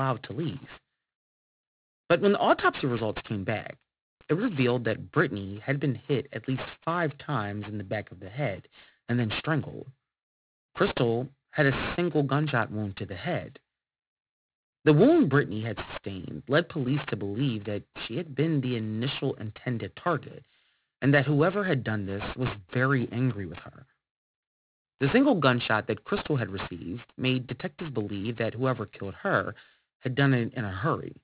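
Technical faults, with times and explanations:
Throughout, aliasing: the speech seems to have been cut to an 8 kHz rate with no filtering, so highs fold below 4 kHz, leaving sibilants gritty and metallic.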